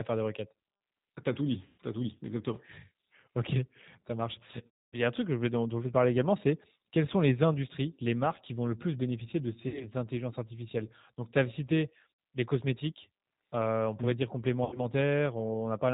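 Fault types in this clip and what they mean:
G.729 codec: Speech sounds rough and slightly synthetic, with nothing above 4 kHz, because an 8 kbit/s codec rebuilds the voice from filters and pulses.
VoIP packet loss concealed by the speech codec: Five dropouts become fading buzzy tones or coloured noise, worst near 4.7 s, as the decoder stretches its last frame across 60 to 260 ms of lost packets.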